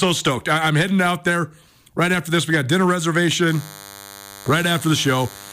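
Speech, and from about 3.47 s to the end a thin, buzzy DECT cordless phone buzz sits well under the voice: 100 Hz bursts, rectified radio pulses from a nearby handset or base.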